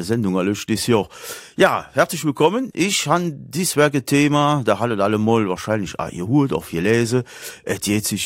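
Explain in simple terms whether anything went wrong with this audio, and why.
Nothing went wrong here: no audible faults anywhere in the recording.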